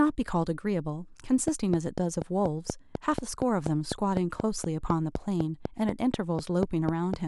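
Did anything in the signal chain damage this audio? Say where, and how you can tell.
Yes, a train of clicks: regular ticks, 4.1 a second, from 1.48 to 7.15 s, about 15 dB over the speech, likely equipment interference on the analogue wiring.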